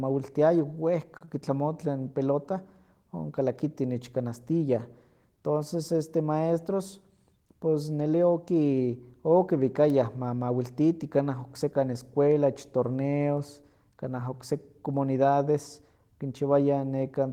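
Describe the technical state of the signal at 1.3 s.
Just before 1.3 s, from 1.17 to 1.23 s, there is a short stall from a late packet. The jitter buffer ran dry, so the receiver held the last sound for about 33 ms until the packet arrived. Playback then resumed with nothing lost, leaving a slightly prolonged speech sound and added delay.

Immediately after, from 1.25 to 1.29 s, comes a short concealed packet loss. About 20 ms of speech never reached the decoder. The receiver filled roughly 24 ms by extending the preceding sound and blending back into the real signal, which is heard as a brief smear or wobble.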